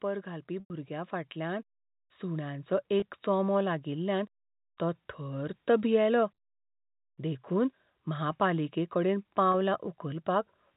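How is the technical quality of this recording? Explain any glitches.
The recording has two kinds of fault: a slow level rise early on and four brief dropouts concealed by pitch repetition, all heard through the telephone band limit of 4 kHz.

Automatic gain rising, from 0.24 to 5.66 s: the gain control judged the input too quiet and raised it by about 8 dB, so speech and background swell together.

Packet loss with pitch repetition at 0.60 to 0.70 s, 3.00 to 3.02 s, 6.34 to 6.38 s and 9.52 to 9.54 s: the receiver bridged each gap by repeating the last pitch period. The short 20 and 40 ms gaps sound like a briefly held, buzzy tone. The 100 ms gap fades toward silence before speech cross-fades back in.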